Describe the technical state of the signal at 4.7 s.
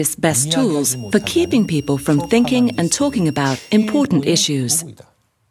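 Nothing at 4.7 s points to a technical fault; the signal there is intact.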